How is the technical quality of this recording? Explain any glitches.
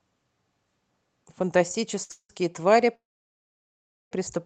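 The speech is interrupted three times by stalls in a call path, whose codec limits the top end to about 8 kHz.

Short stall from a late packet, 2.03 to 2.12 s: a sound is held for about 63 ms with a slight buzz or dip, because the jitter buffer ran empty and the receiver stretched the last sound until the packet arrived.

Call audio freeze, 2.12 to 2.31 s and 2.95 to 4.13 s: the sound turns into a fading buzz or hiss, then silence, for about 70 ms in the first and 1.11 s in the second. Speech then resumes from where it stopped. The likely cause is packets held up in transit, which emptied the jitter buffer while the receiver filled the wait.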